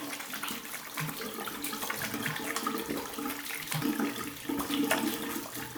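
No technical faults are audible anywhere in this recording of sounds.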